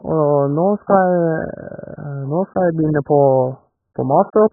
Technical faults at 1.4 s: AAC compression

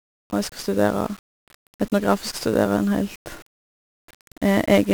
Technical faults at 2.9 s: 1-bit DFPWM compression

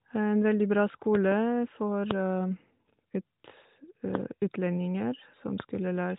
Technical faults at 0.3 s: none

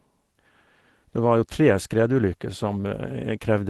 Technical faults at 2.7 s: lost packet rebuilt from error correction

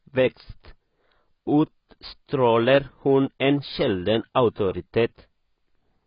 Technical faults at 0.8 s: AAC compression

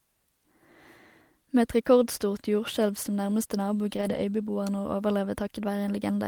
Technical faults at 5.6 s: none

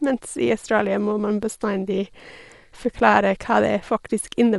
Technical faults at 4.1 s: Dolby Digital compression

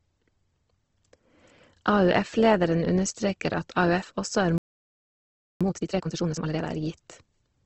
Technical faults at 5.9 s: Opus compression; time-compressed catch-up

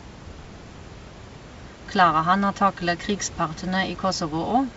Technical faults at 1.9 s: none

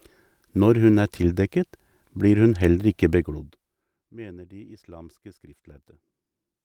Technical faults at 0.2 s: none

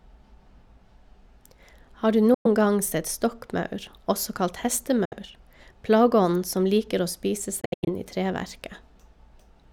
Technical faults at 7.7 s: Bluetooth dropout

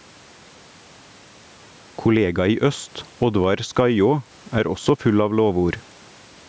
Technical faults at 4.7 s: gain pumping

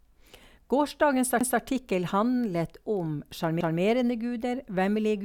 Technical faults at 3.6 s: overlapping chunks

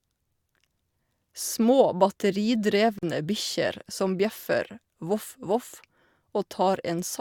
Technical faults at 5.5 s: none

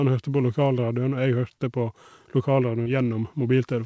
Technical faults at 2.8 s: short concealed packet loss

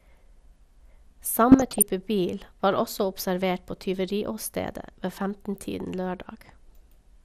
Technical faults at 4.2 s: MP2 compression

